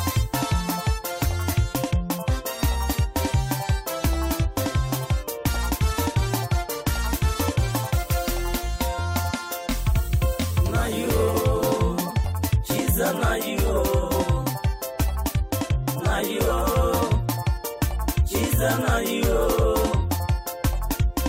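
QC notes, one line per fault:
12.23 s, damaged data in a compressed stream: a brief glitch cuts into the sound for about 16 ms. Part of the compressed data at this point is corrupt, so the decoder cannot read that frame correctly. It loses sync and searches forward for the next valid frame header. The garbled frame comes out as a short glitch.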